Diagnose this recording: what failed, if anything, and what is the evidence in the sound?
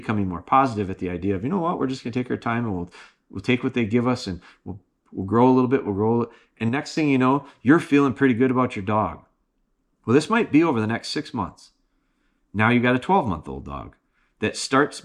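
At 6.69 s, right after "bit we'll grow and", the level drops by about 6 dB in a single step, and both the speech and the background noise fall together until 6.97 s, returning just before "thing you know you're". This is a sudden gain jump at a digital processing stage, likely a one-bit shift or an unramped gain setting. Unlike automatic gain control, there is no attack or release curve, and the noise floor moves with the speech.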